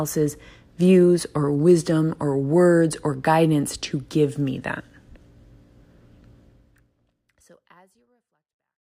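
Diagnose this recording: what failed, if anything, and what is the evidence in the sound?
Nothing failed in this speech recording; the only change in level is a deliberate, smooth fade-out that begins around six and a half seconds and eases gently to silence at the end, with no click or hard edge.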